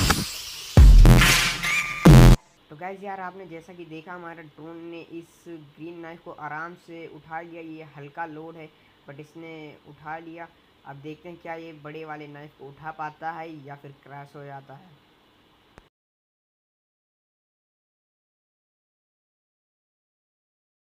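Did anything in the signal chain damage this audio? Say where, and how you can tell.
Yes. Planar audio read as interleaved, from 1.05 to 2.57 s, at the driver or buffer stage: a robotic buzz at about 86 Hz, with no clear octave shift. Each 11.61 ms block of left-then-right samples is read as alternating pairs, which fits a 512-sample buffer.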